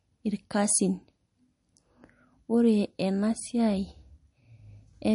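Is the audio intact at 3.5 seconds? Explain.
No, at 3.5 s the speech carries the same MP3 compression damage as the whole clip: nothing above 10.6 kHz, with watery, swirly artefacts, likely from a starved bitrate around 40 kbps.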